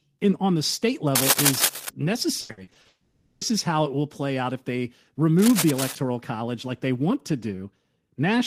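From 1.15 to 1.90 s, just after "in on the state", cable scratch noise covers the speech: dense, uneven crackling about as loud as the voice, likely from a worn cable or connector being moved. On a spectrogram it appears as ragged broadband speckle, and the waveform shows jagged spikes.

From 2.41 to 2.87 s, repeated packet loss (robotic sound) makes the speech choppy. Six gaps, the longest 80 ms, are patched by repeating the preceding sound, so over half of this stretch is filled in. The spectrogram shows smeared, repeated frames breaking up the normal speech detail.

From 2.87 to 3.43 s, a long network dropout follows. About 540 ms never arrives, likely because the network stream stalled, and the receiver stretches the last sound into a fading buzz before "is how it will" resumes. The spectrogram shows a flat, blurred band in place of speech structure.

From 5.38 to 5.96 s, between "play out if they" and "college like they want", the cable scratch noise returns a little quieter than the voice, again as a broadband speckled smear with spiky waveform peaks.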